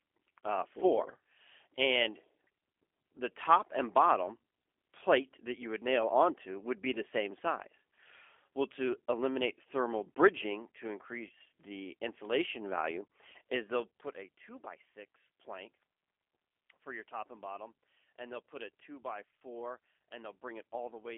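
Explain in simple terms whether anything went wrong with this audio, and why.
The speech passed through a G.729 codec, a low-rate phone-call coder that rebuilds the voice from a rough model instead of sending it whole. From start to finish, everything above about 3.5 kHz is gone, so the voice sounds narrow, muffled and plainly rough, with a slightly synthetic edge.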